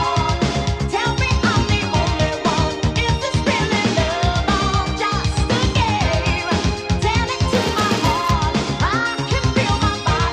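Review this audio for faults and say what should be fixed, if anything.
From 7.51 s to 8.31 s a regular buzz at about 188 Hz rides on the audio, rising and falling with its level. This is a filter restarted on every block: the filter discards its stored state at each block boundary and begins again from silence, so every block opens with a small transient. Those transients repeat at the block rate, and the 188 Hz spacing fits a 256-sample block. To prevent it, carry the filter's state across block boundaries instead of resetting it each time.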